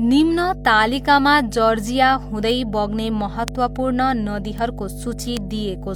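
A ground loop or nearby transformer is feeding the 50 Hz power line into the signal for the whole clip. The result is mains hum, a steady low tone with some low harmonics, sitting strong under the speech at roughly 10 dB below it.

At 2.50, 3.48, 4.58 and 5.37 s, single bits flipped somewhere in storage or transfer. Each one throws a sample's value off by a power of two before it snaps back. Each bit error spike is one sharp broadband tick, unrelated to the speech. The second and fourth seem to span a few consecutive samples.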